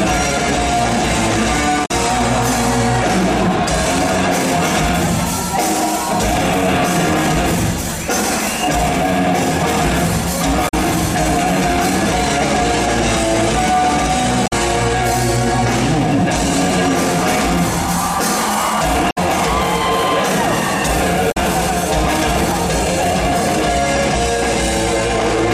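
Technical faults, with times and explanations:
1.82–1.91, 10.65–10.74, 14.43–14.53, 19.08–19.18 and 21.28–21.37 s: damaged data in a compressed stream. Each brief blip lasts about a tenth of a second. Corrupted bytes make the decoder misread frames and lose sync until it finds the next frame header.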